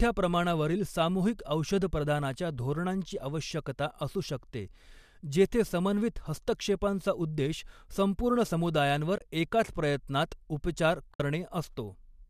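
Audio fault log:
9.18–9.21 s and 11.14–11.20 s, AAC frame loss with muting: brief soft-edged gaps, about 30 ms after "हस्तक्षेपांचा उद्देश संपूर्ण समुदायांवर" and 60 ms after "समुदायांवर एकाच प्रयत्नात उपचार". The decoder zeroed the missing frames' spectrum, and the overlapping windows fade the sound out and back in. The lengths fit runs of roughly 10 ms low-delay frames, likely from the AAC-ELD coding that carries the speech.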